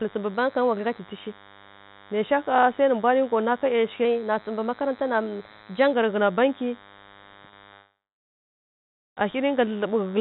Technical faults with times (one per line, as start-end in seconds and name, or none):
0.00-10.21 DECT cordless phone buzz
4.05-5.93 drift correction step
7.49-7.55 short stall from a late packet
7.74-9.19 call audio freeze
9.69-10.08 jitter buffer slow-down